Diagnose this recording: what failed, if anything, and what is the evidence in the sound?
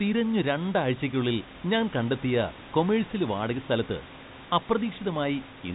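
Nothing stood out on listening to this recording; no stage in the chain appears to have failed.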